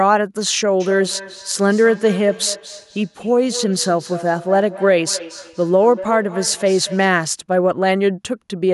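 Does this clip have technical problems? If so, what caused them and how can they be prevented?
Yes. Feedback echo between two devices runs from 0.8 s to 7.25 s. The speech keeps coming back about a fifth of a second after it is spoken, peaking at about 14 dB below the direct speech. A second device in the same room on the same call is playing this microphone's audio aloud, and the microphone picks it up again. Each device's echo canceller only removes sound from its own loudspeaker, so this returned sound passes straight through. To prevent it, mute the microphone and speaker on all but one device in the room, or have each person use headphones.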